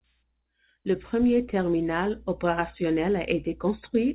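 No technical faults can be heard in this speech.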